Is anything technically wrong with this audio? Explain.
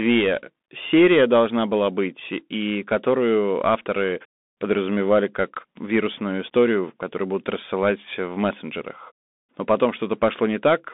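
Yes. Throughout, the speech sounds narrow and scratchy over a granular hiss, with nothing above 3.8 kHz: the Bluetooth CVSD headset codec's adaptive one-bit steps lag loud high sounds.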